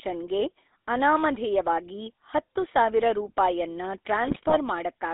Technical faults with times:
0.00-5.13 GSM full-rate codec
4.24-4.58 GSM bit errors

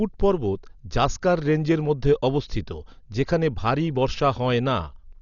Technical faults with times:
0.00-5.21 Dolby Digital compression

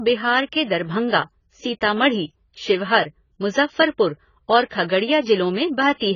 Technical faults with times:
0.00-6.16 AAC compression

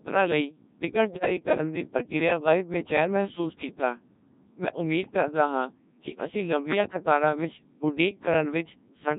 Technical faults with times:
0.00-9.19 Codec 2 vocoder
1.05-1.26 bit errors on digital voice radio

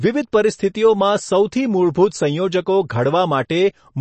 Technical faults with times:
0.00-4.01 MP3 compression
3.49 pre-echo

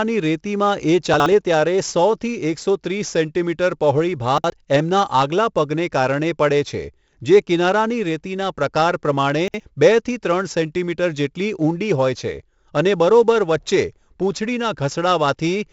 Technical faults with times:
0.00-15.73 4-bit ADPCM compression
1.14-1.26 chunks out of order
4.38-4.50 chunks out of order
9.48-9.60 chunks out of order

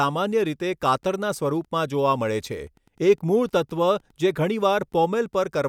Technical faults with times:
0.00-5.68 Wi-Fi interference

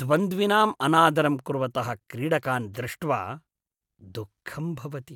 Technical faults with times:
none

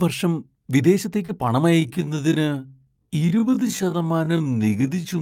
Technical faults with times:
1.25-1.30 short concealed packet loss
1.67-5.21 time-stretched section

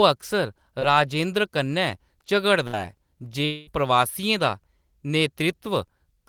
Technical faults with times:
0.79-0.83 short concealed packet loss
2.67-2.75 burst of packet loss
3.45-3.69 long network dropout

